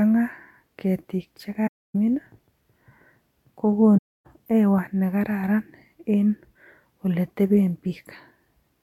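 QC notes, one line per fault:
1.67–1.95 s: AAC frame loss with muting. About 0.28 s of speech drops to silence; zeroed frames between overlapping windows give a soft fade out and in.
3.97–4.26 s: AAC frame loss with muting. The same 0.28 s soft-edged hole, consistent with roughly thirteen lost frames, ending just before "hewa nekararan en".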